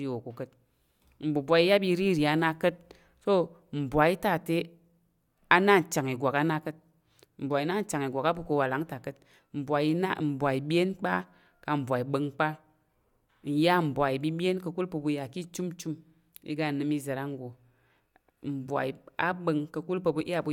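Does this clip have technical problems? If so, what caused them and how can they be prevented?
No, this clip has no technical problems, so there is nothing to prevent.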